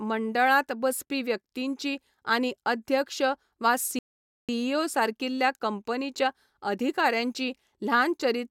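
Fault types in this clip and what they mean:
Rebuffering stall: The player used up its downloaded audio and had to wait for more. In this speech clip, the sound drops to silence at 3.99 s. It stays silent until 4.49 s, a gap of about half a second. Then the speech picks up exactly where it stopped. No syllables are skipped or repeated. Nothing is lost. The pause simply adds 0.5 s to the playback time.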